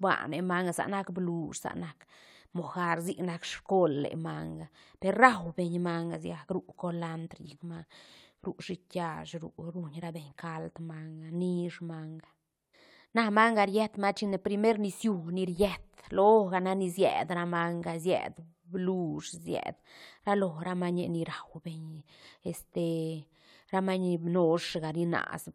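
No technical faults are audible anywhere in the speech recording.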